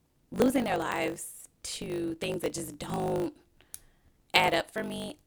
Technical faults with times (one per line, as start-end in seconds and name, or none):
0.00-5.26 block size mismatch (truncated)